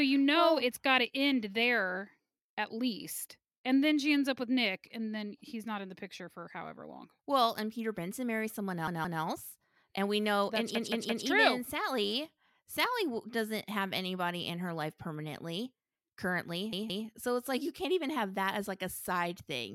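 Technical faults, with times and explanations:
8.88–9.22 s, repeated buffer: right after "marries someone", a chunk of about 171 ms plays three times with a hard join at each repeat, heard as a stutter.
10.75–11.26 s, repeated buffer: a piece of the same length plays four times in a row.
16.73–17.07 s, repeated buffer: just before "so it's like you", a piece plays three times. New audio arrived late each time, so the device replayed its last buffer, which fits an 8192-sample buffer. No speech seems to be skipped.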